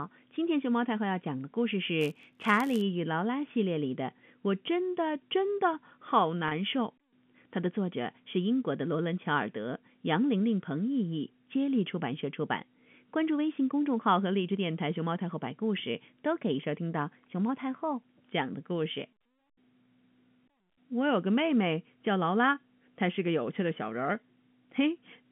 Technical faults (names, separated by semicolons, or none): block size mismatch (padded); packet loss with pitch repetition